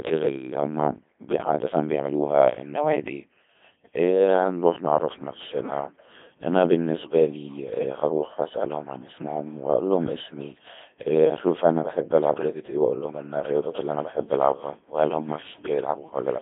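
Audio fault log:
Throughout, Codec 2 vocoder: the speech comes out robotic and buzzy, with nothing at all above about 3.6 kHz and the band squeezed to roughly 150 Hz to 3.5 kHz. The damage is heavy, which fits a low-rate 2.4 kbit/s mode. The original waveform is gone. Only pitch, voicing, energy and a rough spectral envelope made it through, and the decoder rebuilt the voice from sine waves, hence that synthetic, smeared edge.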